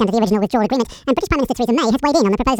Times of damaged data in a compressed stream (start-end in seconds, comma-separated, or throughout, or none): none